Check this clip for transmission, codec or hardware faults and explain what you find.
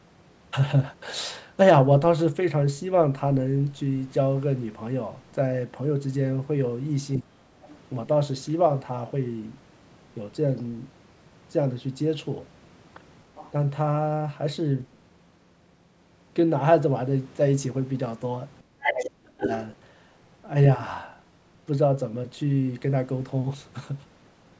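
Two echo-canceller faults show up in this speech.

Speech suppressed in double talk happens at 7.18–7.44 s, where the talker drops by about 25 dB, and at 18.72–19.44 s, by about 35 dB. The canceller likely couldn't separate the talker from the far-end echo and turned both down.

The other side's voice leaks through in faint scraps at 7.63–7.78 s, 10.57–10.61 s and 13.35–13.52 s, roughly 20 to 30 dB under the speech. At 18.83–19.09 s and 19.39–19.64 s it's nearly as loud as the talker. That's likely loudspeaker echo left in the microphone signal.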